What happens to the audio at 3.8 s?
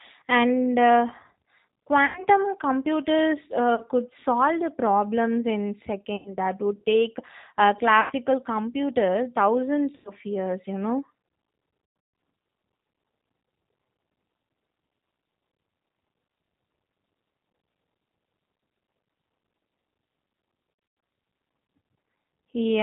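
VoIP packet loss concealed by the speech codec, from 3.75 to 3.84 s, just before "could solve the problems": about 30 ms of audio went missing, which fits a single lost packet. The decoder stretched its last pitch and filter with falling gain, giving a brief, fading smear that stays weak as speech resumes. Underneath, the G.729 codec at 8 kbit/s cuts everything above 4 kHz and leaves a plainly audible rough, synthetic edge.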